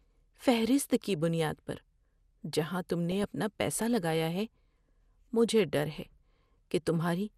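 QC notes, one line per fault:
Throughout: MP2 compression. The speech sounds dull and a bit granular, with a plain gurgle and the top end dropping in and out. That's likely an MPEG Layer II encode without enough bits: the coder runs out of bits for its 32 sub-bands, so it shuts off the upper bands and quantises the rest coarsely. How audible it is points to something around 80 kbps, and the damage is plainly there rather than subtle.
3.12–3.24 s and 5.48–5.64 s: DAB burbling. Two short bursts of burbling sit over the speech, each only about 0.13 to 0.15 s long. This is bit errors getting past error correction into the MP2 data. Corrupted samples put short blips of noise into single sub-bands, and corrupted scale factors make sub-bands leap in level for up to a frame, which gives the burbling sound. The first burst sounds a little denser, which fits a higher error rate there, and its length suggests around eight frames were hit. 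The second is lighter but stretches a touch longer, over something like a dozen frames.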